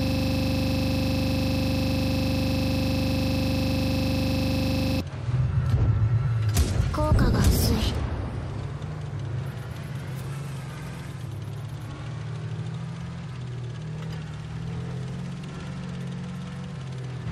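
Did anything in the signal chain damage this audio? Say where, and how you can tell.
Yes. From the very start until about 5.0 s, a system hang loop at the driver or buffer stage repeats one 40 ms piece of audio more than a hundred times, giving a rough 25 Hz buzz. The host stalled while the hardware kept replaying its ring buffer.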